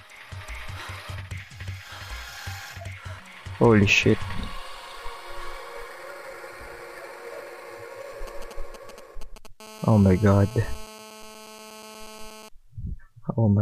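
From 8.27 to 9.47 s the audio picks up GSM signalling bursts: a galloping dit-dit-dit of short raspy buzzes at 217 Hz, sitting roughly 15 dB below the wanted sound. A nearby 2G phone is exchanging brief bursts with its network, and the audio circuitry rectifies the radio pulses into audible clicks. On a spectrogram these show as short vertical clusters of stacked harmonic lines spaced 217 Hz apart. The waveform shows repeating packets of sharp spikes riding on the signal. Almost immediately afterward, from 9.60 to 12.49 s, a continuous GSM phone buzz takes over at about 18 dB below the signal. This is a 2G phone in a call, transmitting steadily at 217 bursts per second, and rectification turns that pulse train into a hard, harmonic-rich rasp unrelated to the audio content. A spectrogram shows an unbroken comb of horizontal lines at 217 Hz and its multiples reaching well into the kHz range. 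The waveform carries a regular picket-fence of spikes every 4.6 ms for the whole stretch.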